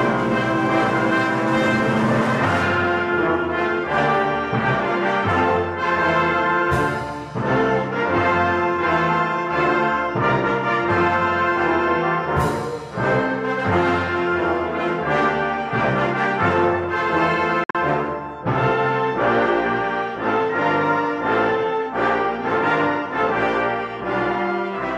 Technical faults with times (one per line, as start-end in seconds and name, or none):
17.64-17.75 Bluetooth dropout